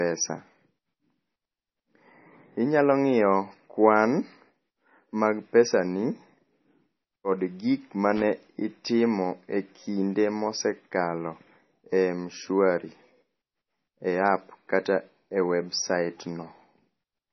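From start to finish, the speech has nothing above about 5.9 kHz and carries the smeared, swirly texture of heavy MP3 coding. This is likely low-bitrate audio saved at a high bitrate, consistent with a 24 kbit/s MP3 re-encoded at around 180 kbit/s. Unlike a simple low-pass filter, the coding artefacts remain audible inside the band.

From 8.16 to 8.25 s comes a short, irregular burst of loose connector crackle. A poorly seated contact repeatedly broke and restored the signal, chopping it into scratchy fragments. Its uneven, gritty spacing separates it from a single clean click or the silent gap of a dropout.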